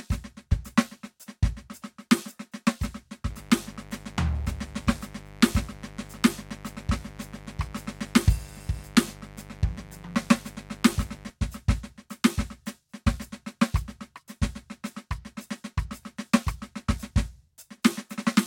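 A mains buzz enters from 3.31 s to 11.31 s: sharp switching spikes from the 50 Hz supply leak into the signal path twice per cycle, stacking harmonics well up into the kilohertz range. The music carries a steady, raspy buzz roughly 20 dB beneath it for those 8 seconds.

At 17.18 s the waveform jumps abruptly, most likely from dropped samples, with a handful of samples missing from the stream. Too little is lost to remove any music, but the discontinuity produces a single sharp click, a thin vertical line across the spectrum.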